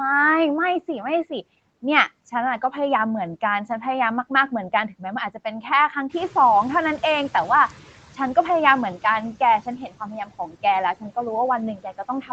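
Right from the start you can hear noise suppressor artifacts in this speech. The suppressor is pulling steady background noise down by about 16 dB, working frame by frame across frequency bands. So the floor dips in the gaps and creeps back up under the talking.

Around 6 s the room noise jumps by about 11 dB, and from 6.09 to 7.76 s you get the noise suppressor catching up. Its noise estimate lags behind the new level, so that louder background spills through with only about 10 dB taken off. Then over roughly 1.67 s it gradually sinks as the estimate adapts. It sounds like the background noise swelling in and then being slowly reeled back down.

Near the end there's speech cut by the noise suppressor, where it mistakes bits of the talking for noise. The cuts fall at 9.66 to 10.01 s (dropping as deep as about 11 dB), 10.47 to 10.64 s (about 10 dB) and 11.77 to 12.3 s (about 10 dB). The first two each cost around a tenth of a second of sound in total and the last about 0.15 s, and those moments come out swallowed or faint, ducked along with the background.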